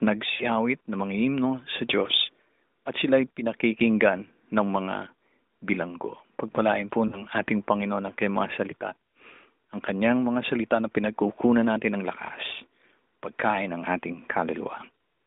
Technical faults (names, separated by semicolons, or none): lost AMR speech frames